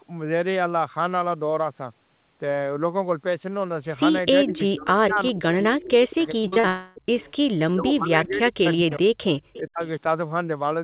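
From 4.45 to 5.47 s the speech dips in pieces by as much as about 40 dB over roughly 0.7 s, likely speech suppressed in double talk, with the echo canceller attenuating the near talker while the far side speaks. At 5.13 to 5.19 s a faint copy of the speech, about 20 dB down and 0.41 s late, is likely echo leak from a loudspeaker the canceller failed to clear.

A second double-talk suppression, likely again, runs from 5.65 to 7.16 s, cutting about one second in all. Inside it, another likely echo leak appears at 6.22 to 6.27 s with the same 0.41 s delay. From 6.42 to 6.66 s repeated packet loss produces robotic, choppy sound: four short gaps, the longest 45 ms, with about half the span patched by extended sound. Immediately after, 6.68 to 6.98 s is likely a long network dropout. About 0.28 s of speech is lost and replaced by a fading continuation of the last sound.

At 7.21 to 7.33 s a weaker echo leak, about 30 dB down and 0.41 s delayed, is likely heard. 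From 7.75 to 9.22 s the speech is again chopped, likely by double-talk suppression totalling around one second. Another likely echo leak follows at 9.40 to 9.59 s, about 20 dB down. A last brief suppression, likely from double talk, takes out roughly 0.2 s from 9.59 to 9.82 s.

The band stops at 4 kHz, consistent with G.711 A-law at 64 kbps on the call path.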